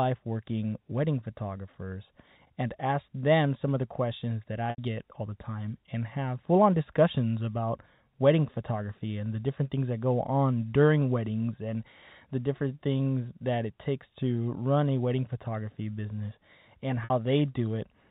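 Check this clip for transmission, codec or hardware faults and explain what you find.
The speech shows packet loss with pitch repetition twice, at 4.70 to 4.78 s (80 ms, which fits four lost 20 ms packets) and 17.04 to 17.10 s (60 ms). The receiver loops the last pitch period and fades it out, so each gap becomes a brief buzzy hold that sinks toward silence before the speech cross-fades back. The G.711 telephone band carries the speech around both gaps.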